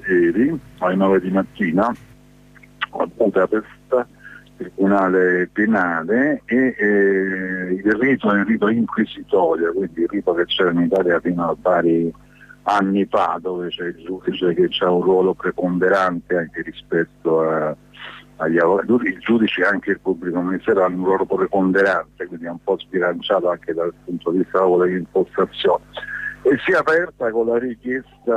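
At 10.96 s a block of digital silence, only 0.32 ms long, drops out, likely where the output buffer went unfilled, heard as a tick and seen as a flat-line notch with a full-height vertical spectrogram stripe.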